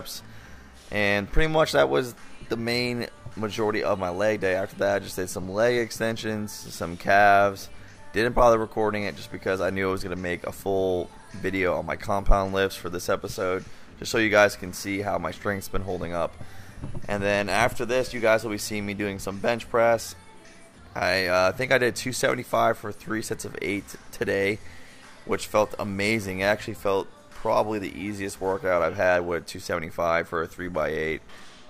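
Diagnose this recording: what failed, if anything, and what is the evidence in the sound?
Nothing failed anywhere here.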